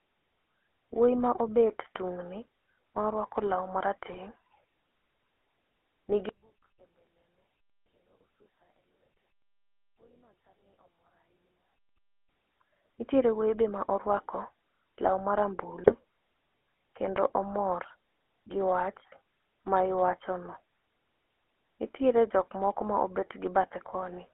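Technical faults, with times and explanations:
Throughout: GSM full-rate codec. The speech has that buzzy, gravelly roughness of the old 13 kbps GSM coder, squeezed into a phone band of roughly 300 Hz to 3.4 kHz. It models the vocal tract and rebuilds the excitation from sparse regular pulses, so the damage is plainly audible.
4.12 to 4.19 s and 15.84 to 15.95 s: GSM bit errors. Two short bursts where the speech turns to squawks and gargles. Corrupted bits reached the decoder, scrambling filter, pitch or gain values over a handful of frames, so the spectrum bends and the level jumps.
6.29 to 12.29 s: one channel inverted. For six seconds the speech nearly vanishes, dropping by about 38 dB and leaving only a faint residue. The likely cause is one stereo channel with reversed polarity, so the centred voice cancels when the two are summed to mono.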